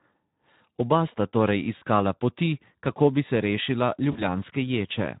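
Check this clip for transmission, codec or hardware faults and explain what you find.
Two faults are present: Speex coding across the whole clip, and packet loss concealed by the speech codec in two brief spots.

Speex codec, throughout: starved excitation at a rate that fits about 11 kbps leaves the speech hoarse and grainy, a steady texture rather than isolated dropouts.

VoIP packet loss concealed by the speech codec, at 1.77–1.83 s and 4.11–4.21 s: each gap fits two lost 20 ms frames. The decoder extends its last pitch and filter, so there is a short buzzy or noisy smear that fades instead of a clean silence or a click, and the sound stays weak briefly afterward.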